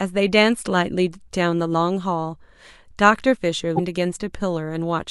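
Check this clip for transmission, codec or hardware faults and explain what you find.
One codec fault appears in this speech. From 3.75 to 3.80 s there is damaged data in the compressed stream: corrupted bytes cause the decoder to misread the affected frames and lose sync until it finds a valid frame header, producing a short chirp, squawk, click or hole in the speech.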